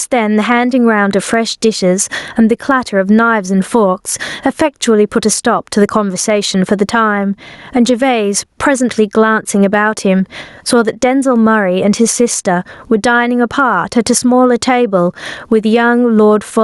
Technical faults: gain pumping

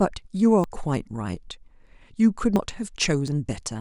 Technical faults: dropped buffer (overrun)

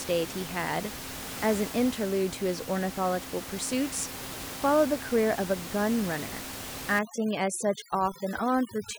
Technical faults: overdone noise removal

